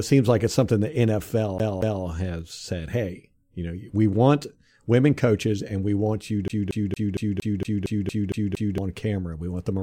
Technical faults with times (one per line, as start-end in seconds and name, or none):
1.58-2.04 CD stuck on one turn
6.48-8.78 CD stuck on one turn